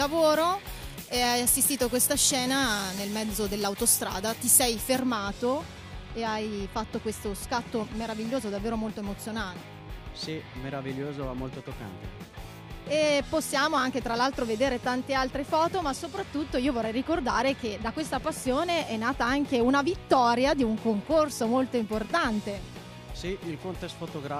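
From 0 to 4.99 s the sound turns thin, bright and hissy, because pre-emphasis was left on: an FM 75 µs treble boost, about 14 dB at 10 kHz, never de-emphasised.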